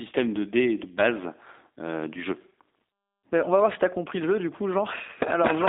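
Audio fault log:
throughout G.729 codec: the speech is held to a 250 Hz to 3.7 kHz line band, nothing above 3.8 kHz, and has a plainly rough, synthetic grain from being rebuilt with a pitch predictor and sparse pulses. This fits 8 kbit/s G.729A; plain band-limiting would lack that grain.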